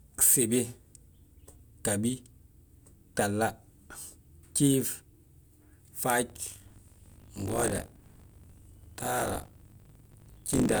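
Speech with buffer tearing from 6.28 s to the end: a steady 50 Hz robotic rattle riding on the signal. Writer and reader of the ring buffer have drifted out of step, so roughly a fifth of each period replays audio from about 40 ms earlier, with hard joins.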